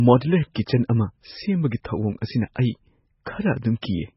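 Throughout, likely MP3 compression starved of bits, fitting roughly 16 kbps, cuts everything above 5.6 kHz and leaves the speech heavily watery and swirly.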